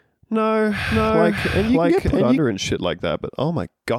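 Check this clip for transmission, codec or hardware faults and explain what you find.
One fault: a doubled audio track between 0.9 and 2.38 s, ending just before "and shit". For that stretch the speech is heard twice, a second full-band copy trailing the first by around 0.7 s at roughly equal loudness, with no reverb tail or room colour, and it cuts in and out abruptly. The cause is likely the same signal reaching the mix a second time through a slower path, or an edit leaving two misaligned copies overlapping.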